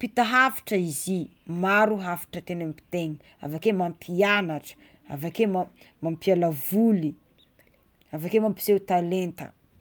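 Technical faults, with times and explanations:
No technical faults can be heard in this speech recording; the signal holds steady throughout with no dropouts, distortion or interruptions.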